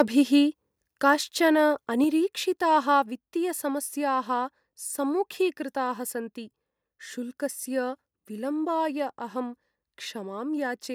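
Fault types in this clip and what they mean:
Microphone overload: The input level was likely set too high for the converter, so the loudest peaks ran about 2 dB past full scale and their tops were sliced flat. Roughly one sample in twenty is flattened this way, all packed into the first 0.02 s of the speech. That squared-off waveform adds a brief, harsh crackle right at the opening rather than a clean onset.
Microphone volume stepped down: The call software likely judged the microphone too hot and cut the device's input gain in a single move instead of easing it down. At 2.04 s the whole signal, voice and background together, drops by about 4 dB at once. It sounds like an abrupt step into quieter audio, with no fade.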